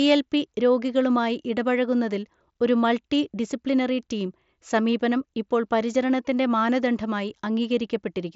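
Nothing technically wrong can be heard in this speech clip. It comes through a Bluetooth mSBC headset codec, with nothing above about 7.7 kHz and only a light graininess from the codec on louder sounds.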